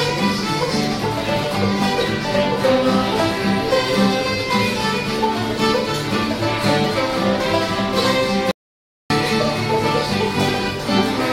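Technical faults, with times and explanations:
8.51–9.10 s, audio dropout to silence: the sound cuts off mid-flow and about 0.59 s of digital silence follows, with no room tone beneath it, before the audio resumes abruptly. Whatever occurred in that gap is lost, likely because the input feed briefly disconnected while recording continued.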